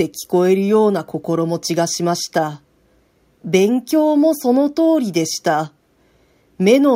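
No technical faults can be heard anywhere in the recording.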